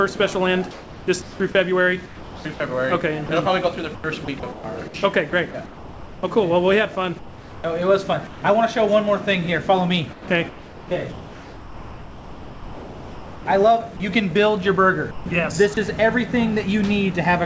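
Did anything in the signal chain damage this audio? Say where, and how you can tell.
Yes. At 0.71–6.23 s, 7.19–8.42 s, 10.13–14.0 s and 15.11–15.77 s the sound turns choppy. This is likely sound chopped by the voice detector in call processing, which swapped stretches of real sound for comfort noise.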